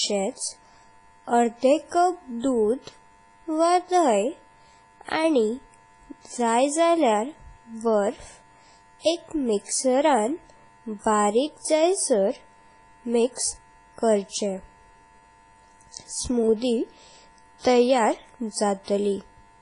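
Heavy WMA compression damage runs through the whole speech clip. There is nothing above 10.1 kHz, and the sound is ringing and washy, with smeared transients and hiss that swells and fades with the signal. This likely comes from long-block transform coding at a low bitrate, around 24 kbps.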